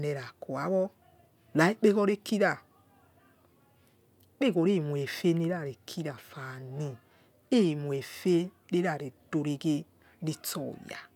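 No technical faults are audible anywhere in this recording.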